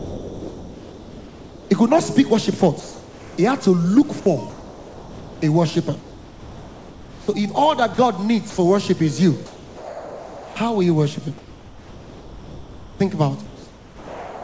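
Low bit depth without dither runs through the whole clip. Quiet passages turn gritty. The error sits roughly 30 dB below the signal. The likely cause is truncation to about 7 bits with no dither, so the rounding error tracks the waveform. All of this rides on a band that stops at 8 kHz, as G.722 at 64 kbps does.

From 0 to 1.70 s, comfort noise replaces the background. The real room sound gives way to a flat, featureless hiss, about 3 dB quieter. It happens again from 2.80 to 3.38 s, about 2 dB quieter this time. The likely cause is discontinuous transmission: the sender stops sending during pauses, and the receiver fills the gap with synthetic noise shaped like the background.

From 4.50 to 8.58 s the sound is chopped by the voice detector. The detector likely switched between sending and not sending more than once, and about 2.3 s in total went to comfort noise. Soft edges and quiet passages vanish, and the stretch sounds choppy.

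Sound is dropped by the voice detector from 9.46 to 10.56 s. About 0.48 s of quiet sound is lost. The detector likely took it for background and stopped sending. Steady noise stands in until the detector triggers again.

From 11.38 s to the end, comfort noise again replaces the background. Inside that stretch, from 13.46 s to the end, sound is dropped once more, and about 0.49 s of quiet material gives way to the same smooth fill.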